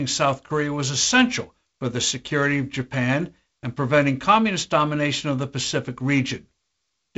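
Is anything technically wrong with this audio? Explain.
No, nothing's wrong here: it's speech carried over what sounds like ordinary G.722 wideband telephone coding, with the top end rolling off around 7.8 kHz and the faint grain you'd expect from one of its lower bitrate modes, which is simply how that path sounds.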